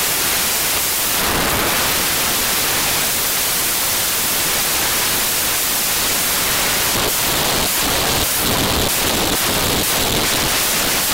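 Samples built from the wrong bytes affect the whole clip, from the first moment to the last. The reader assembles each sample from its bytes incorrectly, so the rapidly fluctuating low-order bits end up as the most significant part of every value. The result is loud, harsh broadband noise in place of the intended sound, close to white on the loud passages.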